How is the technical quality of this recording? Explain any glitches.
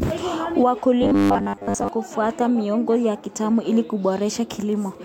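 One fault affects this speech recording. From 1.03 to 1.89 s, just before "kufuata miongozo ya kitaalamu", there is robotic sound from repeated short buffers. A rigid, metallic buzz near 100 Hz follows the voice only roughly. The likely cause is audio arriving too late, so a 10 ms buffer repeats and most of the real sound in that stretch is skipped.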